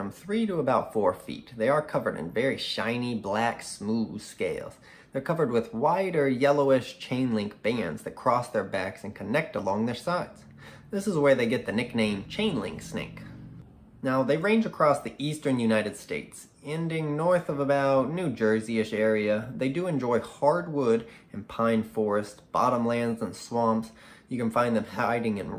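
No technical faults can be heard anywhere in the recording; the signal stays steady and intact throughout.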